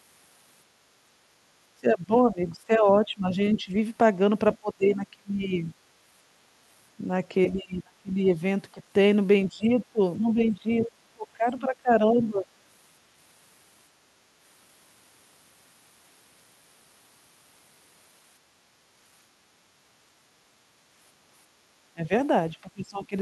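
It's a speech clip, and the talker keeps getting squashed whenever both ends talk at once. That's speech suppressed in double talk, likely an echo canceller that can't tell the near voice from the loudspeaker echo and ducks everything. It happens at 1.81–3.75 s (down about 15 dB at worst), 4.6–5.7 s (about 25 dB), 7.5–8.82 s (about 30 dB), 9.48–12.47 s (about 20 dB) and 21.93–23.15 s (about 20 dB). In each case the voice dips or breaks up in pieces. Alongside that, there's the other side's voice leaking through in short scraps, likely residual echo the canceller didn't fully remove from the mic. You get 4.53–4.89 s at roughly 20 dB under the talker, a quick blip at 9.80–9.84 s around 30 dB down, and 10.84–10.91 s, the loudest at about 15 dB down.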